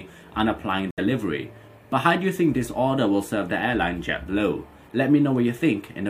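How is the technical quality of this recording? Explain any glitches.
There is one glitch, a corrupt frame muted, from 0.91 to 0.99 s. Compressed data was damaged, the decoder rejected it, and the player substituted silence. The result is an abrupt hole of about 86 ms, which fits roughly three frames, with timing preserved afterwards.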